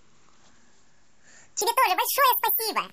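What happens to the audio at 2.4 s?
Audio read two samples at a time (double speed), from 1.61 s to the end: the speech plays twice as fast and an octave higher.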